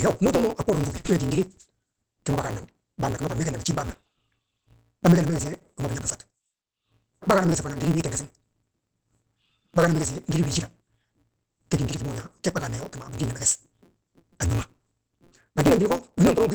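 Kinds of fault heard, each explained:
Opus voice compression: Present throughout, this is speech squeezed through Opus at about 10 kbps using its SILK linear-prediction coder in wideband mode. At that rate the coder keeps only a rough model of the vocal tract and a coarse excitation signal in 20 ms frames, so nothing survives above about 8 kHz. The damage is heavy: the voice sounds muffled, hoarse and somewhat robotic, with the crispness of consonants smeared away.
Block size mismatch (truncated): Throughout the clip, one stage hands over blocks longer than the next stage reads, and the tail of every block is discarded. Each cut leaves a seam, and these seams repeat fast enough to form a steady buzz at 172 Hz, which fits a 256-sample read. Because part of every block is lost, the speech runs about 1.88 times too fast while keeping its timbre, sounding hurried.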